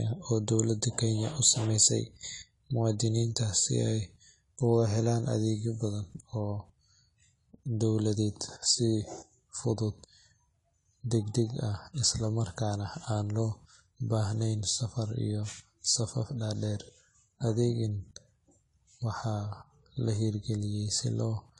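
AAC compression damage runs through the whole speech clip, with nothing above about 11.4 kHz. The likely cause is AAC-LC coding at a low rate, with a sound that fits roughly 32 kbps. Too few bits for the spectrum forces the encoder to drop the top band and quantise the remaining frequency lines coarsely. The speech sounds dull and plainly smeared, and sibilants and held sounds take on a fizzy, warbling texture.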